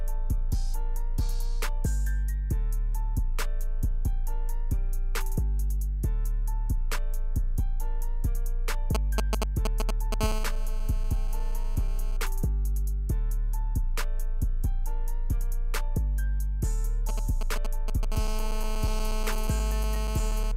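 From 8.95 to 10.14 s GSM signalling bursts break in, a galloping dit-dit-dit of short 217 Hz buzzes at roughly the level of the audio. A nearby 2G phone is sending brief groups of radio bursts that the audio circuitry rectifies. At 10.21 s this turns into steady GSM phone buzz lasting until 12.17 s, a hard, raspy 217 Hz tone rich in harmonics at about 15 dB below the signal, as the phone transmits in bursts 217 times a second during a call. The same sequence repeats: signalling bursts from 17.09 to 18.13 s, roughly 10 dB down, then continuous buzz from 18.13 to 20.52 s at about 12 dB below the signal.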